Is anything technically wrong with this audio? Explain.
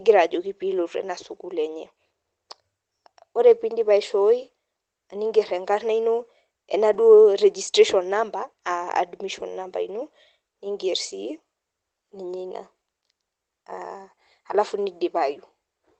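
Yes. A lost packet rebuilt from error correction occurs at 6.93 to 6.99 s in this Opus speech call. The following packets carried low-bitrate backup copies of the missing audio, so about 40 ms, consistent with two 20 ms packets, plays without a gap but sounds briefly rougher and noisier.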